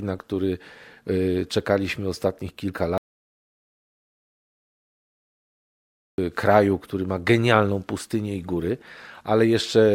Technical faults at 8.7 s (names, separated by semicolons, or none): none